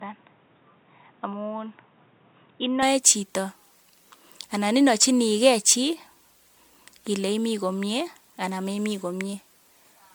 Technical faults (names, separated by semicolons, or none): generation loss; input switched to a poorer device